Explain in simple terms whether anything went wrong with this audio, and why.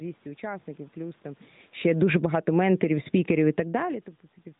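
Two things went wrong, both caused by the automatic gain control, the part of the system that adjusts loudness on its own.

From 1.78 to 2.43 s there is automatic gain falling. The control decided the sound was too loud, or its background too strong, and turned it down steadily, so the audio sinks noticeably over a little more than half a second. What shows it's the system and not the talker is that the room's background noise drops right along with the voice. A person moving away from the microphone would make only their voice quieter, not the room noise.

Starting at 2.34 s, just before that drop finishes, and lasting until 3.85 s, there is automatic gain rising. The control then went the other way and slowly turned the sound back up over about a second and a half, recovering part of the loss. Again, voice and background swell together, and the rise is gradual. The talker's own movements around 1.5 s and 3.5 s change only the voice.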